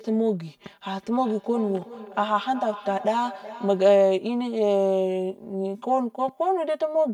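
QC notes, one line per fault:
throughout: channel delay (comb filtering). One channel arrives roughly 5 ms behind the other, and when the two are folded to mono the shared speech cancels at regularly spaced frequencies, the first near 100 Hz and the rest following at even intervals up the spectrum. That leaves the voice hollow and phasey from start to finish. Unlike an echo, nothing repeats in time; the colouration is fixed and present on every syllable.
0.97–4.12 s: feedback echo between two devices. A second device in the same room replays the incoming audio, the other device's microphone catches it, and the loop sends each word back roughly every 400 ms, peaking at about 16 dB below the direct speech. The repeats sound thinner and more metallic than the original. What separates this from room reverberation is the distinct, evenly timed copies rather than a smooth tail, and the fact that they appear and vanish within this span.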